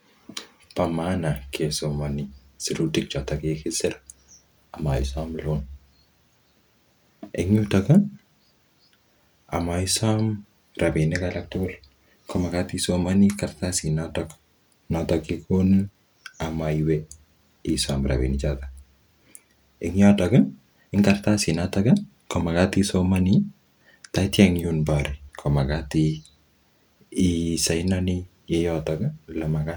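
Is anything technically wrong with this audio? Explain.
No, I hear no technical faults in this speech recording.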